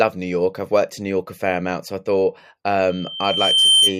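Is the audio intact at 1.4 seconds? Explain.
Yes, at 1.4 seconds the speech plays through intact, with no dropout, glitch or other fault at that moment.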